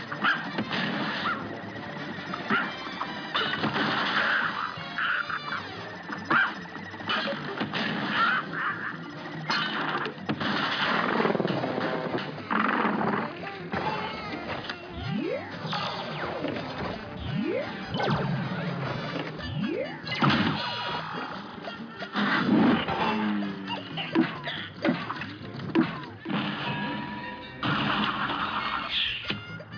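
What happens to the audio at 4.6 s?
Nothing goes wrong at 4.6 s; the audio plays through that moment intact, with no dropout, click, glitch or other technical fault.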